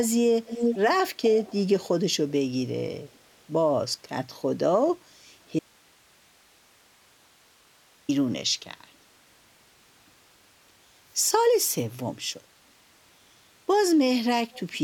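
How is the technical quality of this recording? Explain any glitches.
The recording has two kinds of fault: a pair of short echo leaks near the start and one long dropout in the middle.

Echo leak appears from 0.45 to 0.78 s and again from 1.36 to 1.56 s. A copy of the speech trails the original by about 392 ms. In the first stretch it is roughly as loud as the speech itself. In the second it is much weaker, around 20 dB down. The likely cause is a far-end loudspeaker whose echo canceller failed to fully subtract what its microphone picked up, so that residue was transmitted back.

An audio dropout to a faint residue runs from 5.59 to 8.09 s, removing about 2.5 s of signal. The speech stops abruptly rather than fading, and the gap contains only hiss, roughly 35 dB below the normal speech level. When the signal returns, it comes back mid-flow. This points to the wanted signal likely being lost upstream while the path after the break stayed open and carried its own noise floor.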